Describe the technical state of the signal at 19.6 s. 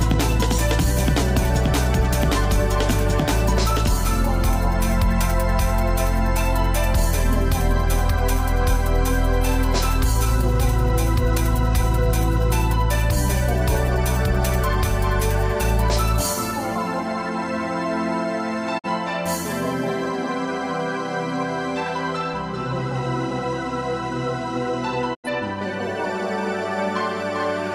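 At 19.6 s the signal is intact, with no technical fault audible at that point.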